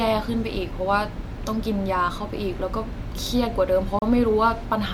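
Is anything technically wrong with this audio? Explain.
Yes. At about 3.99 s a gap at a join of encoded pieces opens in the speech and lasts until 4.02 s, a gap of roughly 32 ms. The audio was encoded as separate pieces and joined without trimming, so the encoder's start-up delay and the padding of the previous piece's last frame both remain. Unlike a natural pause, its edges are smeared by the codec, and the speech resumes exactly where it stopped, with nothing missing.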